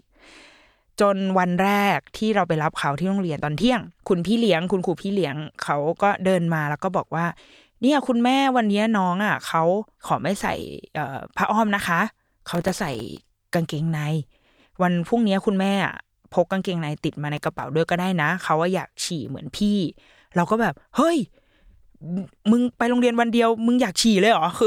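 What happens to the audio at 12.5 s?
At 12.53 s a burst of processor overload crackle begins and runs to 13.30 s. The processor misses dozens of very short buffer deadlines, each near 1.5 ms, leaving tiny silent gaps. The speech tears and crackles. A waveform shows rapid dropouts, and a spectrogram shows thin broadband vertical streaks.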